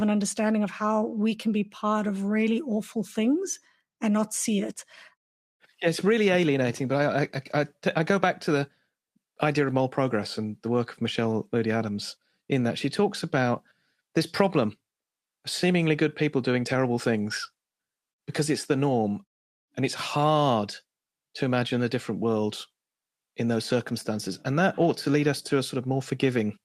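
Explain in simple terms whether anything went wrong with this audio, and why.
Nothing went wrong with this speech recording, since no technical faults can be heard anywhere in it.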